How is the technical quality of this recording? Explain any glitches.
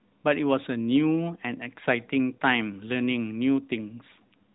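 No audible glitches or faults.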